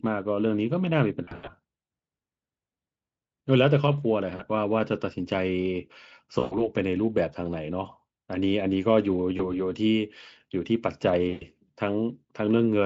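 Five stretches of VoIP packet loss concealed by the speech codec, at 1.23–1.54 s, 4.35–4.41 s, 6.39–6.68 s, 9.37–9.55 s and 11.29–11.46 s. The Speex decoder lost packets and kept extrapolating its last pitch and filter at falling gain, so the speech smears into a buzzy, fading tone and stays weak briefly after. The first is the worst, with gaps scattered over about 240 ms. The Speex coding around them sounds clean.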